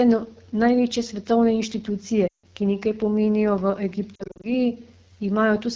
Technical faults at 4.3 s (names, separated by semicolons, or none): AMR wideband (HD Voice) codec; lost AMR speech frames